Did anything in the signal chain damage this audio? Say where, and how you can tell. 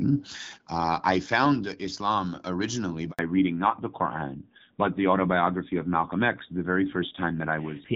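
Yes. At the network stage there is a handover gap at 3.11 s: the speech fades within tens of milliseconds into 80 ms of silence. Unlike random packet loss, it is a single gap, and the sound quality changes right after it.

At the codec stage a fallback to narrowband runs from 3.19 s to the end. Nothing remains above 4 kHz, and the speech turns duller and rougher. That fits a switch from AMR-WB at 12.65 kbit/s to AMR-NB at 7.4 kbit/s. A plain low-pass filter would not add that roughness.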